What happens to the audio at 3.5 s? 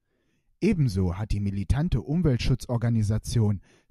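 Nothing goes wrong at 3.5 s; the speech carries on intact through that moment with no audible fault.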